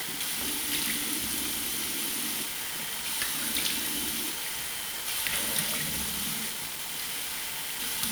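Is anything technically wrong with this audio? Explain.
Yes. Throughout the clip the sound is coated in a coarse, grainy distortion that shifts with the sound, nearly as loud as the sound itself. The likely cause is low bit depth without dither: about 5 bits, rounded, so the error tracks the signal.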